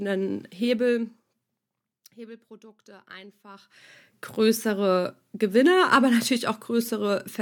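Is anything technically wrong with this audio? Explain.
No, nothing technically wrong can be heard in this speech recording. The level rises and falls smoothly, the way a fader would move it.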